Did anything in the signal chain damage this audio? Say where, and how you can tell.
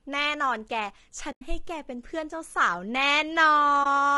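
Yes. At the codec stage, the speech sounds rough and grainy throughout, with noise between the harmonics. That's likely low-delay AAC compression (AAC-ELD), consistent with about 32 kbps.

On the network side there's AAC frame loss with muting: soft-edged dropouts at 1.31–1.42 s and 3.83–3.86 s, fitting five frames and one frame. The decoder zeroes the lost frames, and the overlapping windows fade the sound out and back in.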